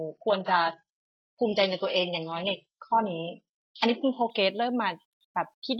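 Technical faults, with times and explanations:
0.0 to 4.3 s, adaptive stream starting at a low bitrate: the speech opens thin and smeared, with nothing above 9.9 kHz and heavy codec artefacts, a sound that points to a very low-rate parametric codec around 8 kbit/s, then jumps without any gap to a clean, full version that fits roughly 96 kbit/s. On a spectrogram the top band is empty or blotchy until 4.3 s, then fills in at once; the waveform shows no break.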